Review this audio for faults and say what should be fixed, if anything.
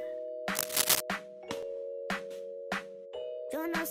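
Cable scratch noise runs from 0.54 to 1.01 s: a dense, irregular rustle and crackle laid over the sound, peaking around 10 dB louder than the audio itself. The likely cause is a worn cable, connector or control being moved, so its contact resistance jumps erratically and injects uneven bursts of noise for about half a second. Replace or clean the suspect cable and connectors, and secure them so they cannot shift during recording.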